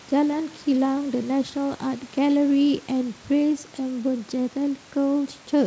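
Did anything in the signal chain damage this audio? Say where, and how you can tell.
No, nothing in the signal chain damaged this audio.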